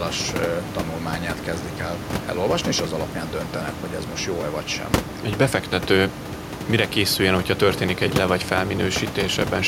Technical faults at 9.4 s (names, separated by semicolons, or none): none